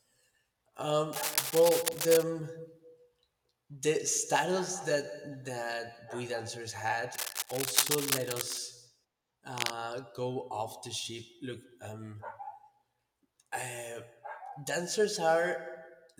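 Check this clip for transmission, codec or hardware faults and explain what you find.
Cable scratch noise appears three times in this speech clip. It runs from 1.13 to 2.24 s, 7.14 to 8.58 s, and 9.56 to 9.73 s. Dense, uneven scratching bursts sit over the speech at about the same level. A worn cable or connector being moved, changing its contact resistance, is the likely cause.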